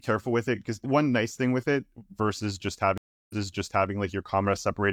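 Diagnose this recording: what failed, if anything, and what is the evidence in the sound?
Network stage: a stream reconnect between 2.98 and 3.90 s. After "with it versus just", 322 ms of silence, then a restarted decoder resumes 0.6 s earlier, repeating material.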